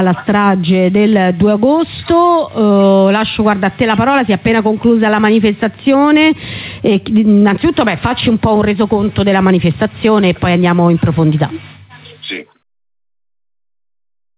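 Gain pumping runs throughout, likely from input gain set far too high with a fast limiter clamping every loud sound, so the gain swings by about 10 dB. Nothing reaches above 4 kHz, which fits a narrowband telephone codec such as G.711 on a call path, and the sound fades out smoothly from around 11.5 s to 12.64 s.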